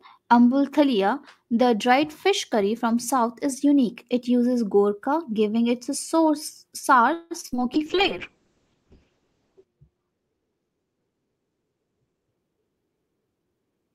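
From 7.13 to 7.60 s there's a burst of repeated packet loss, and it goes robotic and choppy. It sounds like four separate holes close together. Each one is patched by stretching the last bit of sound. The longest hole runs about 173 ms. More than half of that half-second is filled-in sound rather than real audio, and roughly 80 ms just drops out entirely.

Right after, from 7.74 to 12.36 s, there's a call bitrate drop. The encoder gets starved of bits, and the speech turns rough and watery. The top end also gets chopped off, with the audible band shrinking from about 20 kHz down to about 8 kHz, so it goes muffled. The worst of it lasts about 1.9 s. The coarseness points to the rate falling from around 64 kbps to something like 6 kbps before it climbs back.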